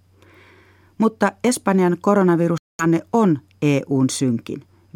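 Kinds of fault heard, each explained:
Bluetooth dropout: The speech cuts out completely from about 2.58 to 2.86 s, a hole of roughly 0.28 s, and when it comes back it has moved on, as though it kept playing while you couldn't hear it. That's the giveaway that material was lost rather than paused. The likely cause is audio packets not reaching the headphones in time and being discarded, so the output sat silent until good data arrived again.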